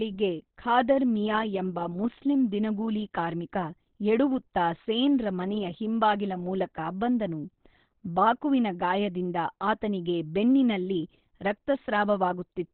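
A speech recording whose whole length is band-limited and damaged in the way heavy Opus compression leaves audio. Nothing is present above about 4.2 kHz, so the sound is muffled and telephone-like, and the remaining band has a hoarse texture. That combination likely comes from the encoder dropping into its SILK speech mode at narrowband, which fits a very low bitrate around 12 kbps, where the codec sacrifices bandwidth and detail to keep the speech intelligible.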